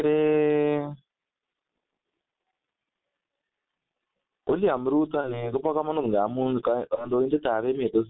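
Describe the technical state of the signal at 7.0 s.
VoIP packet loss concealed by the speech codec covers 6.95 to 7.12 s. About 30 ms of audio went missing, which fits a single lost frame, and the decoder filled it by extending its last pitch and filter at falling gain. The result is a brief, fading smear, and the speech stays weak and distorted until about 7.12 s while the decoder's state recovers.

The G.723.1 codec is active here as it is throughout. The line band runs from 150 Hz to 3.7 kHz, and the heavy coding damage fits a rate near 6 kbit/s. Its slow-updating voice model makes the speech muffled and hoarse, with smeared consonants.

Gain pumping is also present. Level swings of roughly 25 dB squash the dynamics. The likely cause is input gain set far too high, with a fast limiter or compressor pulling it back down.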